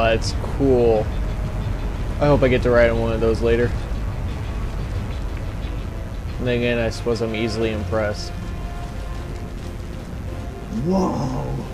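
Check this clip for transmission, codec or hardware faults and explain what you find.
There's one fault here, and it's present the whole way through: mains buzz. Something like a dimmer, a rectifier or a missing shield is letting sharp switching spikes into the signal path twice per cycle of a 60 Hz supply, so you get a stack of 60 Hz harmonics climbing up into the kilohertz range. It sits roughly 30 dB under the audio and comes across as a steady, raspy buzz beneath everything.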